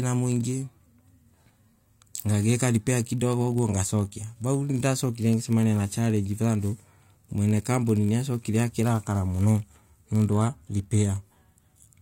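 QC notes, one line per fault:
Throughout: block size mismatch (padded). Each written block falls slightly short of the read size, which fits a 1024-sample buffer, and is zero-filled. This gives a 46.9 Hz buzz over the speech with no audible slowdown.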